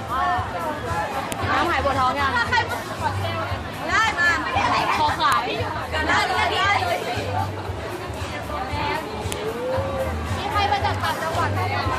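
Sharp, loud snaps land at 1.32, 5.32 and 9.32 s, exactly 4 seconds apart: a file header played as audio. Each piece was joined on with its WAV header intact, so those header bytes get played as a burst of junk samples right at the seam.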